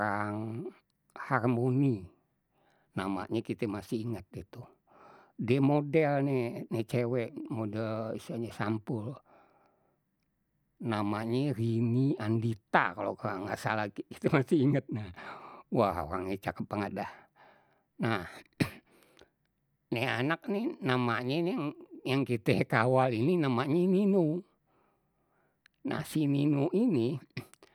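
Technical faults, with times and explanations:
No technical faults can be heard in the speech signal at any point.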